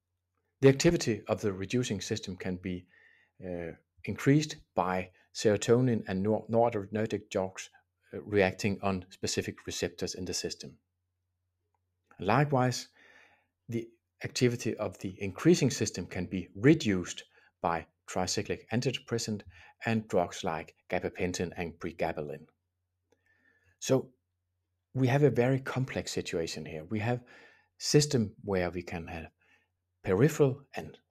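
From 2.85 to 3.41 s, 23.12 to 23.74 s and 29.3 to 29.63 s, sound is cut by the noise suppressor. It mistakes wanted sound for noise and pulls it down, by about 14, 17 and 18 dB. Each dip lasts a few tenths of a second.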